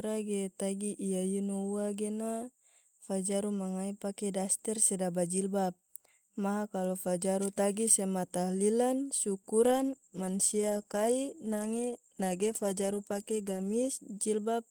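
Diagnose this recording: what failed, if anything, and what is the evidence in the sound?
From 9.63 s to 14.07 s the speech turns rough and muffled. That's a call bitrate drop at the codec: the bandwidth estimate fell, so the encoder coded more coarsely and lost the top end. The sound fits a fall from about 32 to 14 kbps.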